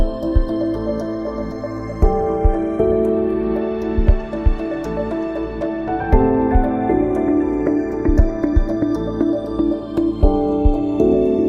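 Channels drifting apart runs through the whole clip: the two sides seem to come from separately clocked devices, about 50 ppm apart, so the delay between them grows to roughly a third of a millisecond. Unlike a flanger's back-and-forth sweep, the mono comb notches glide slowly in one direction only.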